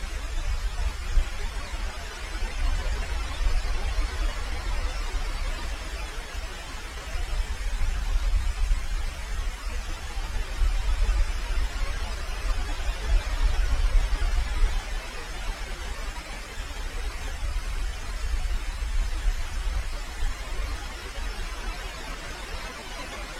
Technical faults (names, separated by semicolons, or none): damaged data in a compressed stream